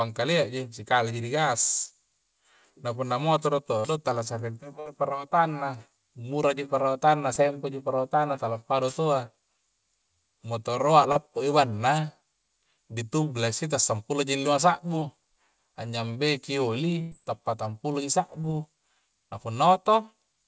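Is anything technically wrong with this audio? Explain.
Yes. The speech was carried over a call link that lost packets in transit. The audio reaches nothing above 8 kHz, which fits a wideband call codec such as G.722.

Short concealed packet loss occurs at 3.80–3.86 s, 7.34–7.38 s, 11.12–11.17 s, 14.99–15.03 s and 18.41–18.45 s. In each, 20 to 40 ms of audio never arrived. The receiver filled the hole by extending the preceding sound, so each spot is a brief smear or wobble, and a short consonant may drop out.

A burst of packet loss occurs at 4.80–4.88 s, where about 60 ms is missing, and at 17.01–17.13 s, where 100 ms is missing. The decoder kept projecting the last sound forward and fading it, so a held buzz or dying hiss bridges the gap. The speech then picks up further along, with that stretch gone.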